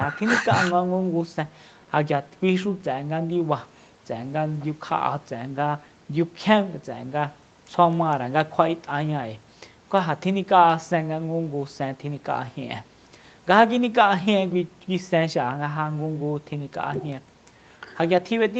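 Nothing in the speech stood out as a technical fault on listening.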